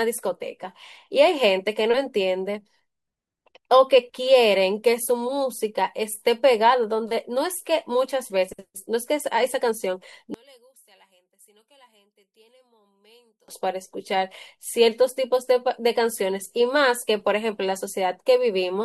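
From 10.34 to 13.48 s the speech falls about 35 dB to a residue, likely one channel inverted; unlike a dropout, a faint trace persists.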